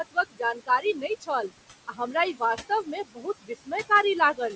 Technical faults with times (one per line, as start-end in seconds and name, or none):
0.00-4.56 noise suppressor artifacts
0.11-1.30 speech cut by the noise suppressor
1.87-2.15 speech cut by the noise suppressor
2.69-3.72 speech cut by the noise suppressor